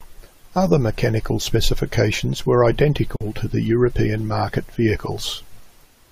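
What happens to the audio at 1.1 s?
Nothing goes wrong at 1.1 s; the speech there plays through intact, with no dropout, click or distortion.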